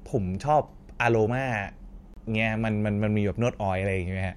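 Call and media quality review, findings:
Hard-edged silent hole in the speech, 2.14–2.17 s, about 27 ms; gap between stream segments at the segment join, fits 1 s segments. Timestamps leave a gap that is padded with silence. Unlike packet loss, no audio is missing; the speech resumes intact, just delayed.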